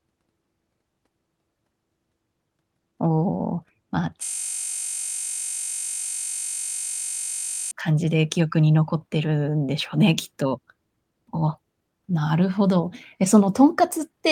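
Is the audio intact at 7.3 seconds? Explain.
No. A system hang loop runs from 4.24 to 7.71 s, so 7.3 s falls inside it. The machine or its audio driver stalled while the sound hardware kept replaying the same ring buffer, repeating one 21.33 ms slice of the speech about 163 times, which fits a 1024-sample buffer. Because that slice is so short, it repeats at 46.9 Hz and is heard as a steady, pitched buzz in place of the speech.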